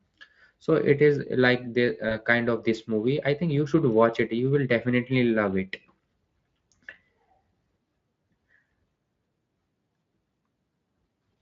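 Around 2.09 s there's a short bit of VoIP packet loss concealed by the speech codec. It sounds like a single 20 ms frame went missing, and the decoder filled the gap by stretching what it last had, which gives a brief, smeared, fading patch. Because each frame leans on the one before, the speech stays weak or off until about 2.19 s. The underlying Speex coding is light, which fits a fairly generous setting.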